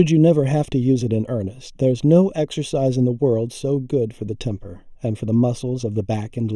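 Throughout the speech, channel delay (comb filtering) gives a hollow, phasey tone: one channel lags by roughly a third of a millisecond before the mono sum, cutting fixed notches from around 1.5 kHz upward. Unlike flanging, these notches never sweep or move.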